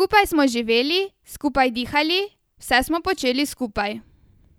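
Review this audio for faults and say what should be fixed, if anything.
No faults heard, so nothing needs fixing.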